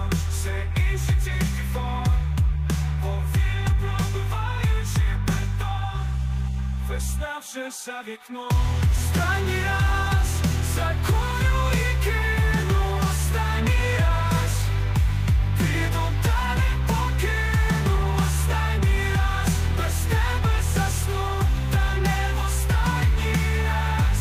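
No faults turn up anywhere in this one, so there's nothing to flag or trace back to a cause.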